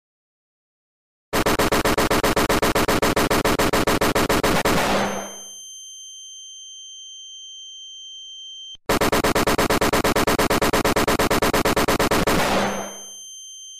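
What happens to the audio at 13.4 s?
Nothing goes wrong at 13.4 s; the audio is intact there.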